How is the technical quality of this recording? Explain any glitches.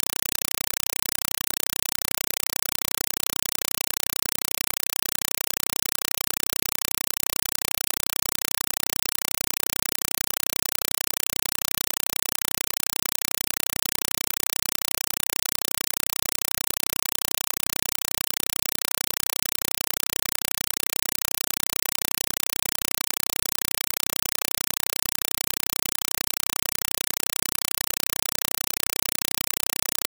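Poor: the speech is replaced entirely by loud, chattering static. Throughout, a compressed stream played as audio: undecoded AC-3 data is treated as samples, giving 4 ms bursts 31.25 times a second. These show as evenly spaced broadband stripes separated by flat silent gaps.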